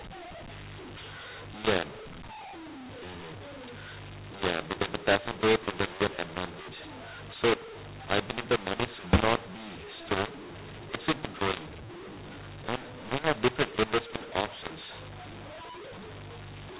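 A telephone speech recording whose samples were written with G.711 A-law but decoded as mu-law, a mu-law and A-law mix-up that runs throughout. Each 8-bit code is mapped onto the wrong logarithmic curve, so levels come back scrambled and the quietest samples are pushed well above silence. The speech sounds harsh and distorted across the whole clip, and the pauses fill with noise, all within the 4 kHz ceiling of the 8,000-sample telephone coding.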